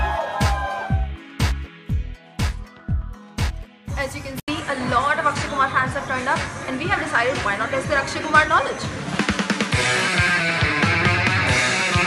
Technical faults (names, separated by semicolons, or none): input switched to a poorer device